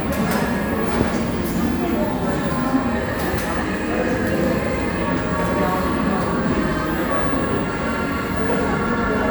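At 1.02 s and again at 4.44 s there is a single sharp click, each one brief and isolated. Both are most likely dropped samples: a fraction of a millisecond of the stream goes missing, so the waveform jumps straight from one value to a later one. Far too little is lost to remove any sound. On a waveform each appears as an abrupt step, and on a spectrogram as a thin vertical line spanning the whole frequency range.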